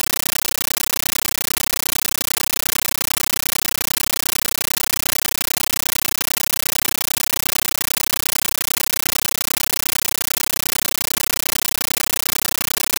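From the first second to the end, the music is replaced by a compressed stream played as audio: an AC-3 (Dolby Digital) stream treated as plain samples instead of decoded. It sounds like harsh, very loud chattering static, with bursts about 13.3 ms long repeating at 31.25 Hz, which fits a high-rate 640 kbps stream. A waveform shows loud noise blocks separated by flat silence. A spectrogram shows broadband vertical stripes evenly spaced every 32 ms.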